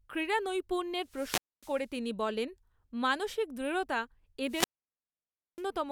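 From 1.02 to 1.88 s the speech suffers a wireless microphone squelch dropout. The radio link from an analogue FM transmitter weakens, hiss rises, and the receiver's squelch cuts the output to near silence for about 0.25 s before the signal recovers. The same fault returns from 4.47 to 5.65 s, this time with a longer mute of 0.94 s, leaving a pronounced hole before the speech resumes.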